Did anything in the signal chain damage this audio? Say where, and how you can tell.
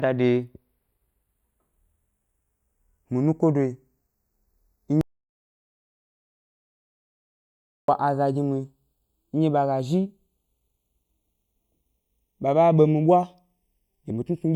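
Yes, two faults. The first is the two channels drifting apart, present for the whole speech clip. This happens at the converter or clocking stage: each channel comes from a device on its own clock, mismatched by something like 20 ppm. The inter-channel delay therefore creeps up to a little under half a millisecond by the end. Summed to mono, this produces slow flanging. On a spectrogram it appears as comb notches gliding gradually through the spectrum, with the lowest notch heading down toward roughly 1.25 kHz.

The second is an audio dropout to silence from 5.01 s to 7.88 s, about 2.87 s of lost signal. The speech cuts off mid-flow and resumes just as abruptly. In between, the waveform is a flat line of silence with no room tone at all, and the spectrogram shows a completely empty block. The likely cause is at the input or driver stage: the source was disconnected or muted while the recorder kept writing silence.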